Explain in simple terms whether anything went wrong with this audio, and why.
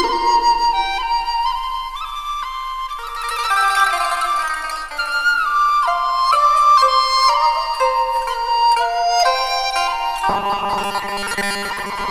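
From 10.29 s to the end at 12.10 s, the sound turns into a rigid, metallic 200 Hz buzz: robotic sound from repeated short buffers. New audio likely arrived too slowly, so most of that stretch is a repeated 5 ms snippet filling the gaps.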